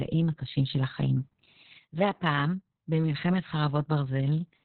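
Throughout, heavy Opus voice compression: nothing above 4.3 kHz survives, and coarse narrowband SILK coding leaves the speech muffled, hoarse and robotic, consistent with roughly 6 kbps.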